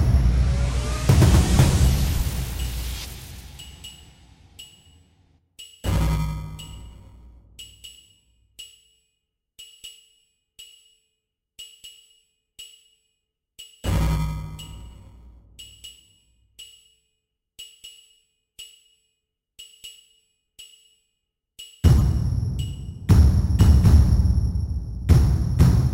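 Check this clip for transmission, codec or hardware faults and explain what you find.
Two codec faults are audible in this everyday-sound recording, both of the same kind: corrupt frame decoded, at 1.52–1.56 s and 21.98–22.01 s. Flipped bits in a compressed frame made the decoder misread gains or codes, so it played energy at the wrong frequencies. Each fault is a fairly loud chirpy blip lasting one frame or two, about 40 ms and 30 ms. Unlike a click or a dropout, each fault lasts a whole frame.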